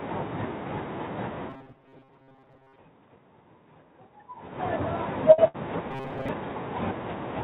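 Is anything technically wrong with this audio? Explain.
Yes, there are two kinds of fault in this speech.

From 1.50 to 2.78 s and again from 5.91 to 6.29 s, the voice turns into a rigid, metallic buzz pitched at 134 Hz. This is robotic sound from repeated short buffers. The likely cause is audio arriving too seldom, so the player keeps looping a slice of roughly 7.5 ms, and most of the real audio in those stretches is skipped. Unlike a loss gap, the speech keeps moving roughly along under the fixed buzz instead of freezing.

At 5.32 to 5.40 s and 5.48 to 5.56 s there are two close bursts of packet loss. Each time about 60 ms of audio never arrived, and the receiver covered the hole for about 57 ms and then 63 ms by stretching out the last sound and letting it fade. You hear a brief held, dying tone or hiss, then the speech jumps ahead. The robotic fault has an imposed pitch, but here the last sound simply hangs and decays before resuming.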